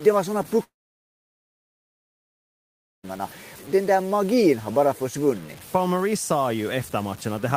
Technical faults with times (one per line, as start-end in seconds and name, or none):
0.00-7.56 low bit depth without dither
0.63-3.05 long network dropout